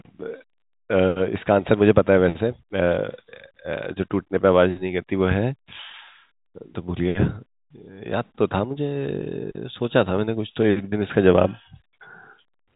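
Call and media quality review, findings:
No faults found.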